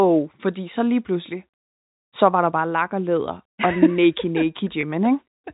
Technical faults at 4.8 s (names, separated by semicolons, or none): packet loss with pitch repetition